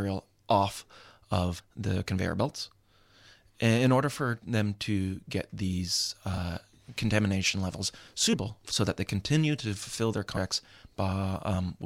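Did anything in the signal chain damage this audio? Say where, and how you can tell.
Yes, the codec stage is skipping compressed frames. Smeared blips at 1.58, 6.36, 8.32, 10.36 and 11.54 s jump ahead by roughly 50 to 300 ms, multiples of a 26.1 ms frame.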